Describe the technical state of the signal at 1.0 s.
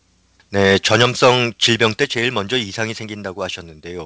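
At 1.03 s the speech and its background drop together in level by about 3 dB in a single step, with no fade. The likely cause is a microphone volume stepped down: the call software judged the input too hot and lowered the device's capture gain at once, so everything after that point sits lower. The signal is band-limited with nothing above 8 kHz, which fits the wideband call codec carrying it.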